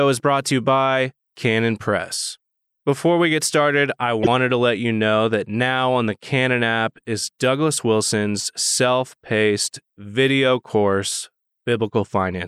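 Corrupt frame decoded at 4.23 to 4.28 s, after "we get started I": a couple of damaged compressed frames were played anyway, misplacing energy into a short chirp, squeak, blip or burst of noise.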